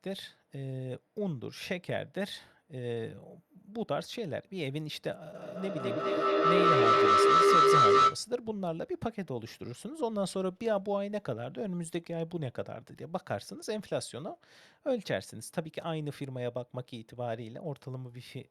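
At 5.35 s a feedback howl starts building and runs until 8.29 s. The sound from a loudspeaker is getting back into a microphone on the same call, and each trip round that loop comes back louder, not quieter. It narrows onto a tone of about 1.5 kHz, pulses about every fifth of a second, and peaks at about 11 dB above the speech. Then it stops, as though the loop got broken.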